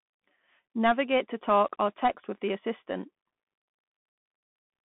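Bluetooth CVSD headset codec throughout the speech: nothing above 3.8 kHz, and plainly audible one-bit up/down step distortion, pointing to a 64 kbps link, leaves scratchy sibilants over granular hiss.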